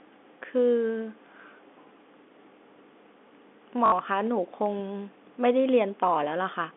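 At 3.86 s there's a brief patch of packet loss with the last packet repeated. About 60 ms went missing, likely three 20 ms packets. The receiver looped the final good one until 3.92 s, giving a 50 Hz robotic stutter over the telephone-band speech.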